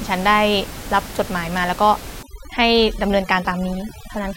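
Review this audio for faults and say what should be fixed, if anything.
Overdone noise removal runs from 2.23 s to the end of the clip at 4.37 s. From that point the noise reduction is clamping individual frequency bands down to almost nothing whenever their level sits close to its noise estimate. With the room noise only about 15 dB below the speech, the quieter parts of the voice fall into that range and get stripped away too. The background collapses into near silence dotted with twinkling specks. To prevent it, lower the reduction amount or raise the floor so bands are attenuated moderately rather than removed.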